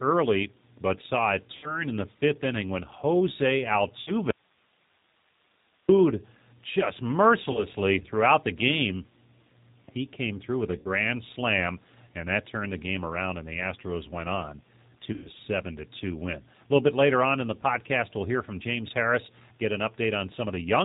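The whole clip passes through the G.729 codec at 8 kbit/s. Nothing above 4 kHz survives. The speech is rebuilt from a coarse filter and a few pulses per frame, so it sounds rough, thin and plainly synthetic.

VoIP packet loss concealed by the speech codec first appears at 1.57 s and again at 4.01 s. Each time about 60 ms of audio is missing. The decoder stretches its last pitch and filter into a buzzy tone or coloured noise that fades, and the sound stays weak briefly afterwards.

At 4.31 s there is an audio dropout to a faint residue. The sound cuts out abruptly for about 1.6 s, until 5.89 s. Only hiss remains, about 35 dB below the signal. The likely cause is a lost feed while the later path stayed live.

Concealment returns at 7.52 s for a 30 ms loss, at 10.79 s for 60 ms, and at 15.13 s for 120 ms.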